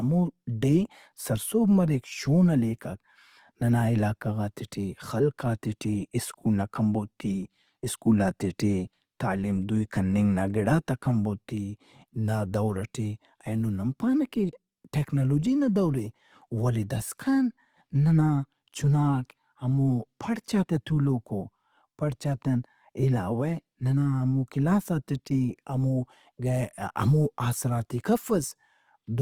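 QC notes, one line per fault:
Throughout, Opus compression: the speech has a rough, grainy texture, with voiced sounds turning noisy rather than clean. Spectral holes and swirl are rare. Bandwidth stays full, reaching about 20.2 kHz. This is likely Opus in its CELT music mode at a low rate, which fits around 24 kbps. It keeps each band's energy but, short of bits, fills band detail with folded copies of lower bands or with noise.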